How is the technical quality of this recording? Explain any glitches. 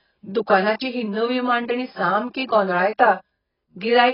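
The technical quality is poor, with heavy codec damage throughout. AAC compression, present for the whole clip, likely comes from AAC-LC at a very low bitrate around 14 kbps. Quantising the spectrum so coarsely removes everything above 5.4 kHz, leaving the speech dull, smeared and warbling, with fizzy sibilants.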